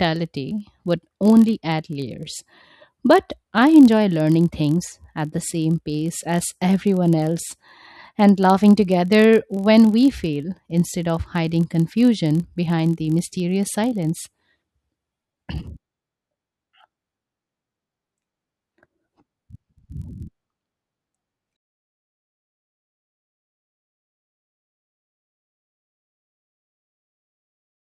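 Filter restarted on every block, throughout this speech clip: a regular tick-buzz at about 43.1 Hz rides under the speech, rising and falling with its level. Each block starts the filter from silence, and the repetition rate fits a 1024-sample block.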